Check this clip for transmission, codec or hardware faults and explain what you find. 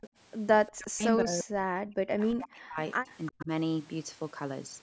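The clip has two problems from the far end of a call: faint echoes of the speech returning, and the main speech being pushed down while both ends are active.

Echo leak, from 0.01 to 0.09 s, 0.67 to 0.72 s and 3.08 to 3.45 s: a faint, delayed copy of the speech surfaces in short scraps, roughly 20 to 25 dB below the direct speech. The likely cause is a loudspeaker-side echo canceller that let residual pickup through, returning it about 352 ms late.

Speech suppressed in double talk, from 0.76 to 2.79 s, 2.99 to 3.08 s and 3.3 to 3.5 s: the speech sinks sharply, in the deepest stretch by around 40 dB, and close to 25 to 35 dB in the shorter spots. It likely comes from an echo canceller that couldn't tell its own talker from loudspeaker echo and attenuated everything together.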